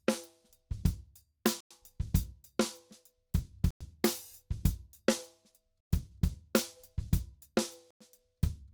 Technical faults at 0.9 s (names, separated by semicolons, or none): none